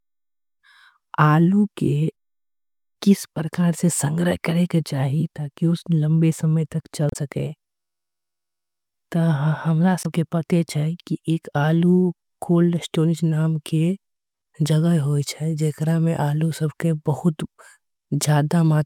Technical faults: damaged data in a compressed stream

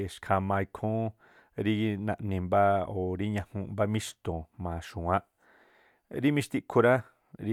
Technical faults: none

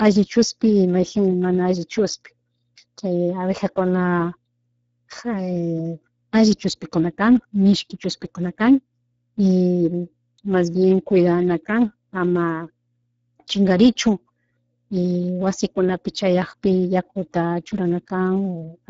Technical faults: Speex codec

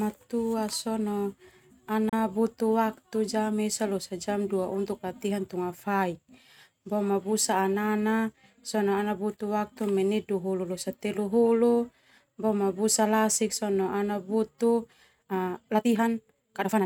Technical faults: digital broadcast dropout; time-stretched section

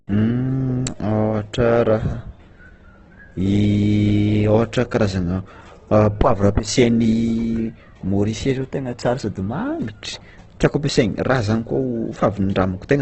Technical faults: Opus compression

